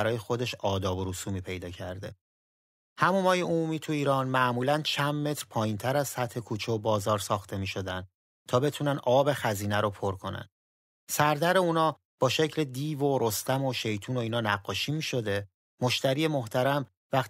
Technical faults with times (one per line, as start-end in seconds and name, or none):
none